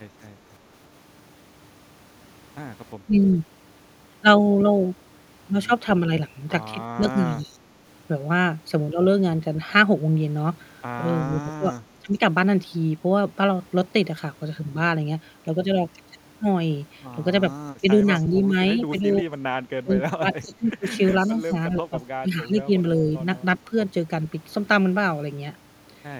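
Speech with two faults. Speech suppressed in double talk dips the voice by roughly 15 dB at 3.06–3.13, 6.95–7.56, 11.41–12.21 and within 17.81–23.74 s, likely from an echo canceller ducking during overlapping talk. An echo leak adds a faint copy delayed by 363 ms at 11.39–12.14, 17.66–19.12 and 20.34–21.52 s. It sits some 30 to 35 dB below the voice and is likely loudspeaker pickup the canceller missed.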